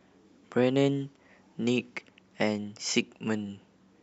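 No technical faults can be heard anywhere in this speech recording. No dropouts, clipping, glitches or other disturbances interrupt the audio at any point.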